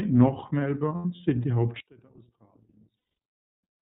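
Throughout, the speech carries plainly audible iLBC codec damage: a slightly rough, synthetic edge, with nothing above 4 kHz. The spectrogram shows a hard ceiling at 4 kHz, and the texture fits iLBC's 30 ms frame mode at about 13.3 kbps.

From 0.96 to 1.20 s there are lost iLBC frames, about 120 ms missing and scattered over 240 ms, with the longest gap roughly 100 ms. That fits four 30 ms frames. The decoder fills each gap by repeating the last pitch cycle with noise, so it sounds like a briefly held, buzzy vowel. On the spectrogram these patches show as flat, smeared harmonic stripes.

From 1.80 s to the end, the level drops by about 29 dB and the centred voice nearly vanishes, leaving a faint remnant. One channel inverted, cancelling in a mono sum, is the likely cause. The waveform shrinks abruptly to a sliver.

From 2.96 to 3.17 s, a second run of lost iLBC frames removes 210 ms, which fits seven frames. 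The concealment produces a longer held buzz that fades as the gap goes on, and the waveform shows a decaying repeated cycle. Because each frame decodes independently, the sound recovers almost immediately afterwards.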